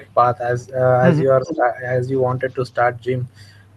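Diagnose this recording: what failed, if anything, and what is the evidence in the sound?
Call processing: between 1.43 and 1.71 s the speech dips by about 10 dB, likely speech suppressed in double talk as the echo canceller turned down both its own talker and the loudspeaker echo.

Call processing again: from 1.46 to 1.57 s a copy trails 377 ms behind, about 10 dB down. This is likely an echo leak from incomplete cancellation of loudspeaker pickup.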